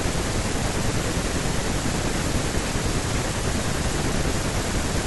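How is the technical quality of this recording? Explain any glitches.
No technical glitches can be heard in this recording. There is nothing that needs explaining, as the speech runs on without any interruption or disturbance.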